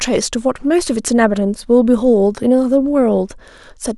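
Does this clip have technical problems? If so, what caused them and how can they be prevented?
No, there are no technical problems to report in this speech clip. Nothing in the recording points to a fault, so there is nothing to trace to a cause or to prevent.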